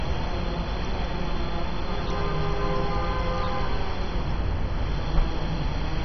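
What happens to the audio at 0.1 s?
At 0.1 s you're already hearing what's likely MP2 compression, present throughout: upper sub-bands are shut off above 6.1 kHz, so it's dull and gurgly, pointing to roughly 32 kbps.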